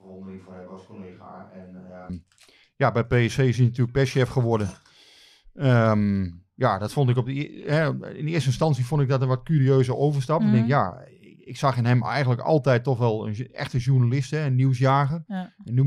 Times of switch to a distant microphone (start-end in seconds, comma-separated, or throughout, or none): 0.00-2.09